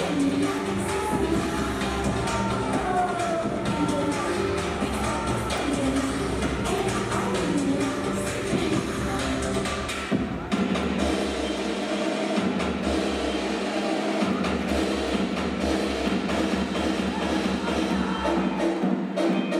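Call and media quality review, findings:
Periodic USB or driver dropouts: regular ticks every 0.25 s, 0.08 s through 19.33 s, roughly 70 of them. Probable component: USB bus or audio driver, blocked by some background task on a fixed cycle. Each stall skips a sliver of audio, around a tenth of a millisecond, and the join clicks.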